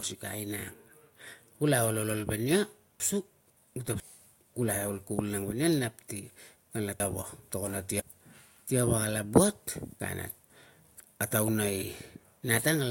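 Chunks out of order occur at 3.0 to 4.0 s, 7.0 to 8.0 s and 10.0 to 11.0 s, just before "a tauna". In each, a half-second chunk plays one chunk late, swapping places with its neighbour. The speech jumbles briefly at each spot.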